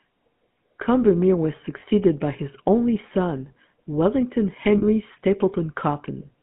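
Speech, passed through the GSM full-rate codec for its whole length. The line is limited to about 150 Hz to 3.5 kHz, which fits a 13 kbps GSM full-rate coder. The voice has a plainly audible buzzy, gravelly roughness. This comes from the pulse-driven vocal-tract model. Lost GSM frames occur twice. At 1.8 to 1.84 s, just before "by his only son", the sound briefly holds as a rough, metallic ring. At 4.78 to 4.84 s the same ring returns, slightly longer. Each time, the decoder replays the last good frame's settings. The first points to one lost frame, and the second to two.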